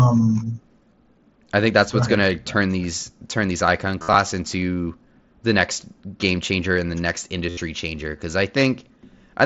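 At 4.02 to 4.15 s, between "these turn these icon" and "into the next game", concealed Bluetooth headset packet loss appears. About 75 ms of audio went missing over roughly 120 ms, the longest gap lasting 60 ms. It is filled by repeating the closest-matching recent waveform, which gives a short buzzy, held tone and a slight warble on recovery. The same happens at 7.50 to 7.57 s, between "changer and the next" and "changer because i", over the wideband mSBC link.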